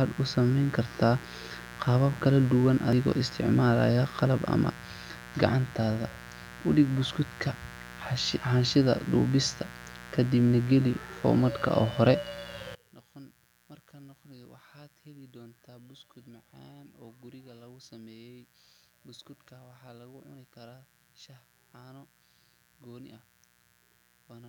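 Speech runs the full length with a mains buzz underneath it, a steady raspy hum built on 60 Hz. Sharp switching spikes, probably from a dimmer, rectifier or unshielded cable, enter twice per mains cycle. On a spectrogram this appears as a ladder of thin horizontal lines at 60 Hz multiples (120, 180, 240 Hz and upward) reaching into the low kHz range. The waveform carries small repeating spikes roughly every 8.3 ms, sitting around 20 dB below the speech. From 12.75 s to the end, the centred speech drops by about 27 dB and collapses into a faint remnant. The likely cause is one channel inverted, so the identical centre content cancels when the two sides are summed to mono and only their small differences survive. On the waveform, the trace shrinks abruptly at 12.75 s. The spectrogram shows the speech energy fading to a ghost.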